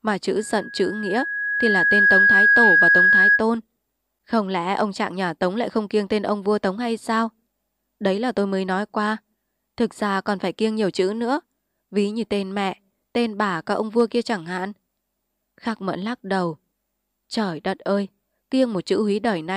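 From 0.37 s to 3.44 s a steady 1.7 kHz tone swells over roughly a second and a half into a piercing squeal, sitting about 10 dB above the sound. This is loudspeaker feedback squeal: the microphone picked up its own loudspeaker, and at 1.7 kHz the loop gain passed one, so that tone kept amplifying itself.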